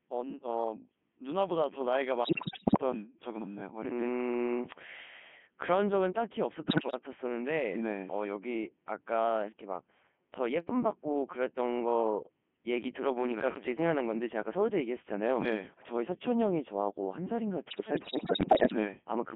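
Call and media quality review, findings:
Codec 2 vocoder, whole clip: robotic, buzzy speech held to about 200 Hz to 3.4 kHz. It's rebuilt from pitch and envelope, and the heavy damage fits the top 3.2 kbit/s mode.

Bit errors on digital voice radio, 2.24–2.81 s, 6.68–6.99 s and 17.70–18.76 s: bleeps, warbles and pitch jumps. Roughly 15% of bits flipped in the first burst and about a tenth in the other two, wrecking whole vocoder frames.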